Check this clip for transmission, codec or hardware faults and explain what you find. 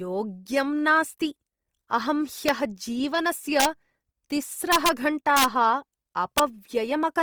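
Two faults are present: codec damage across the whole recording, and a series of integer overflow cracks from about 2.5 s onward.

Throughout the speech there is a grainy, rough texture. Harmonics sound noisy rather than clean, although the bandwidth stays full and content reaches about 20.2 kHz. The likely cause is Opus compression in its CELT music mode, at a rate that fits roughly 24 kbps. Short of bits, the encoder keeps each band's energy but fills the detail with folded or noise-like content. The result is roughness, not the hollow swirl of MP3.

Integer overflow appears at 2.49 s, 3.60 to 3.65 s, 4.72 to 4.89 s, 5.37 to 5.44 s, and 6.38 s. At these points peaks went about 1 dB past the integer limit, and about 2 dB at 6.38 s. Instead of being held at full scale, those samples wrapped around to the opposite extreme. Each one is heard as a violent crack, far harsher than ordinary clipping.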